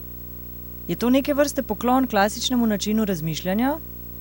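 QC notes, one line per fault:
Throughout: video or display buzz. A steady buzz sits under the speech at 59.94 Hz, with a gritty hash riding above it. A thin, very high tone near 15.7 kHz is also present. The buzz follows the picture's field rate and the whine follows its line rate, which points to a screen or video cable leaking into the audio path. The interference sits roughly 15 dB below the speech.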